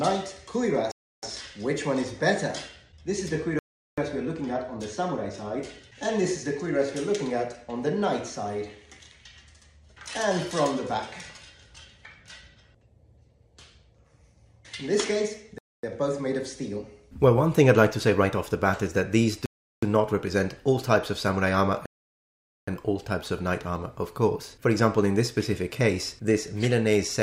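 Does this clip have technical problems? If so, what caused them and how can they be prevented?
Yes. The audio drops to dead silence five times and then resumes: at 0.91 to 1.23 s (315 ms), 3.59 to 3.98 s (386 ms), 15.58 to 15.83 s (250 ms), 19.46 to 19.83 s (367 ms), and 21.86 to 22.68 s (818 ms). This pattern points to a likely Bluetooth stall, where radio interference delays packets until the headphones' buffer empties and playback halts until retransmissions arrive. Keeping the phone close to the headphones with a clear line of sight, and away from busy 2.4 GHz Wi-Fi or other wireless devices, prevents these dropouts.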